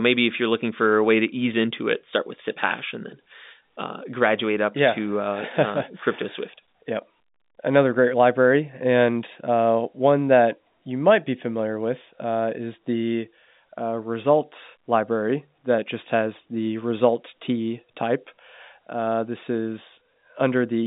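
No technical faults can be heard anywhere in this speech recording. It comes over a G.711 telephone coding path, likely A-law, with the sound held to a line band of roughly 150 Hz to 3.7 kHz and nothing present above 3.8 kHz.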